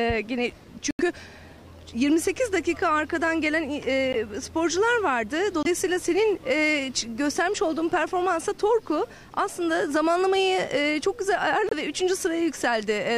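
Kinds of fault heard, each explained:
Bluetooth stall: the sound drops to clean silence at 0.91, 4.13, 5.63 and 11.69 s, for 84, 16, 24 and 26 ms, then resumes, likely a wireless buffer running dry. Unlike a click or crackle, each gap carries no noise burst.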